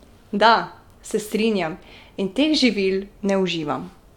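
No technical faults can be heard anywhere in the speech. There is nothing in the recording to mark with a time or trace to a cause.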